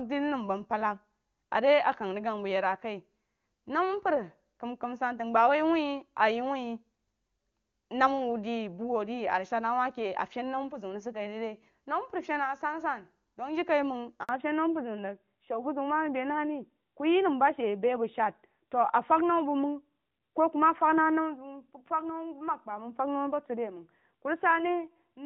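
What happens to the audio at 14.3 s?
A handover gap opens from 14.23 to 14.29 s: as the call switches networks, no speech frames arrive for about 60 ms, so the sound drops out abruptly and stays silent until the new link delivers audio again, losing whatever fell in that window.

From 14.29 s to the end, the call falls back to narrowband, moving from the HD Voice codec to an older one. The sound turns duller and rougher, consistent with AMR narrowband at around 12.2 kbit/s, and nothing above 4 kHz remains.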